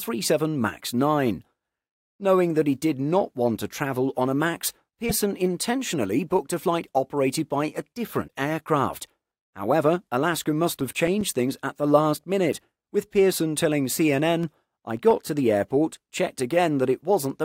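At 8.27 to 8.30 s the audio skips forward with a brief glitch about 26.1 ms long, one MP3 frame's worth. The likely cause is a broken MP3 bit reservoir: frames were lost, and the next frame reached back for borrowed data that belonged to a different frame.

From 10.67 to 11.48 s come seven CD scratch ticks, regular clicks or tiny gaps of only a few milliseconds, about eight or nine a second. A disc blemish defeated error correction once per revolution, so the player patched or muted samples. Eight more follow from 14.43 to 15.38 s.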